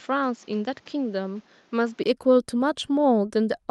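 From 0 to 2.06 s the speech sounds duller and quieter, with nothing above 7.6 kHz, a different background hiss well below the voice and a level drop of around 5 dB, likely an input switched to a poorer device. Unlike a filter change, it ends with a brief 20 ms silence at the switch.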